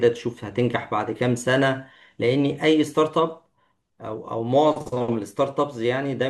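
Speech, with no audible technical faults anywhere.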